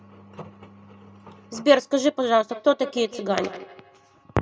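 From 2.51 s to the end, a second device on the same call replays this microphone's signal into it, and neither echo canceller removes it. This feedback echo between two devices returns the speech roughly every 150 ms, thin and ringing, about 19 dB below the direct sound.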